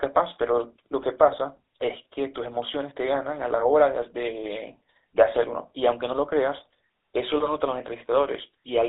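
From the start the whole recording carries the GSM full-rate codec's buzzy, gravelly texture. The band runs only from about 300 Hz to 3.7 kHz, and the roughness comes from pulse-driven excitation, which fits the 13 kbps full-rate coder. The grain is steady throughout, unlike the swirly, watery sound of a heavily squeezed modern codec.

Between 1.32 and 1.36 s GSM bit errors break through as a short squawk and pop. Corrupted filter, pitch or gain values distort the decoded spectrum and level. The burst is so brief that it points to a couple of damaged frames, and it is a garbled outburst rather than a silent dropout.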